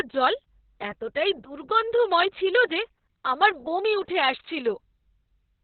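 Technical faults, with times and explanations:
Throughout: Opus voice compression, heavily damaged. Nothing is present above 4.3 kHz, so the speech is narrowband and muffled. The excitation is coded coarsely, which gives a hoarse, slightly robotic edge. The sound points to SILK mode at a very low bitrate, near 6 kbps.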